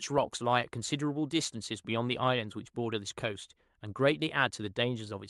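No technical faults can be heard anywhere in this speech clip. It has clearly passed through a call codec, with the top end rolled off at around 12 kHz, and that path is working as it should.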